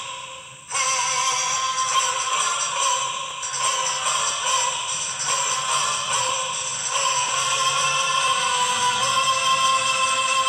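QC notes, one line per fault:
2.32, 3.31, 4.30, 5.30, 6.29, 7.29 and 8.28 s: overlap between stream segments. At each 1-second segment boundary, a few milliseconds of audio that was never actually duplicated get trimmed away. The waveform jumps there, producing a brief click or skip about once per second.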